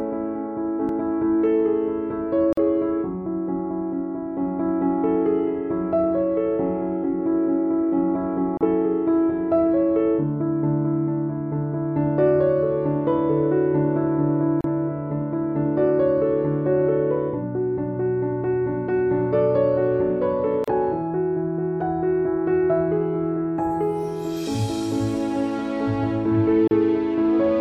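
At 2.53 to 2.57 s the sound drops out for about 46 ms. Further gaps of about 34 ms follow at 8.57 to 8.61 s, 14.61 to 14.64 s, 20.64 to 20.68 s and 26.68 to 26.71 s, one every 6 s. Each is a gap at a join of encoded pieces. Six-second segments were encoded separately and butted together. Each encoder's start-up delay and final-frame padding were left in. The result is a brief hole with softened edges, and the sound resumes where it stopped.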